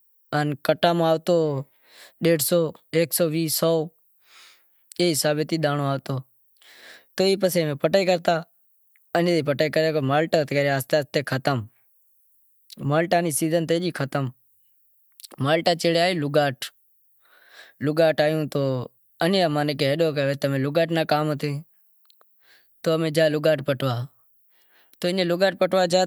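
Nothing in the signal of this recorded speech points to a technical fault at any point.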